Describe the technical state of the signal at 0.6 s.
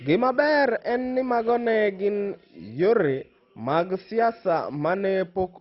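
At 0.6 s the speech carries heavy MP2 compression damage, present throughout the clip and likely from a very low Layer II bitrate near 32 kbps. Upper sub-bands are switched off, leaving nothing above 5.6 kHz, so the sound is dull, with coarse, gurgling granularity.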